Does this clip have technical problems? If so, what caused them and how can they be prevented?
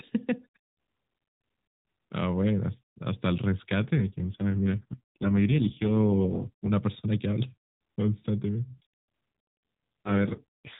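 Yes, there's an AMR rate drop, twice: from 3.96 to 6.71 s, and again from 10.05 s to the end. In both stretches the speech goes buzzier and more synthetic. The band stays narrowband and nothing drops out. What you're hearing is the mobile codec stepping down from what sounds like 12.2 kbps to its lowest mode, around 4.75 kbps, because the radio link weakened. The network pulls bits from the voice model and spends them on error protection. Better coverage or a stronger link would keep the codec at its full rate.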